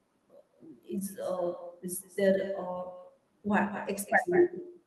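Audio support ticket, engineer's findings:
Every phrase shadowed by a fainter, thinner repeat roughly a fifth of a second behind, throughout, about 13 dB under the direct speech. Echo with no canceller: far-end loudspeaker output re-captured by its microphone, never subtracted, returned over network round trip. Check far-end echo cancellation. Top end rolls off near 12 kHz, consistent with call codec band limiting.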